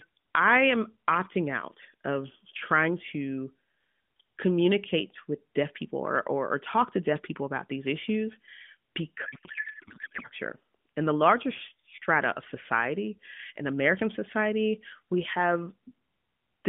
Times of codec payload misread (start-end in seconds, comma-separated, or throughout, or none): 9.26-10.25